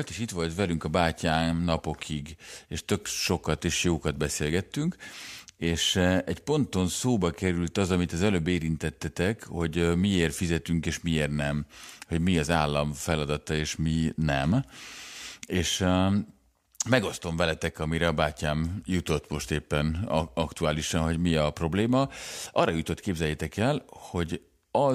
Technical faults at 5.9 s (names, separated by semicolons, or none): none